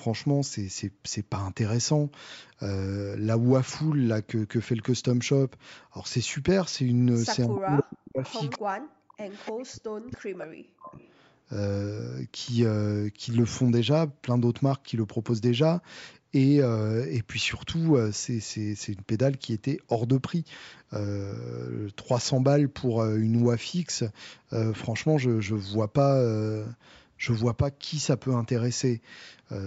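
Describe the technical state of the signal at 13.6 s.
At 13.6 s the speech is intact, with no fault present, only the normal call microphone processing that trims the lowest bass and leaves nothing above 8 kHz.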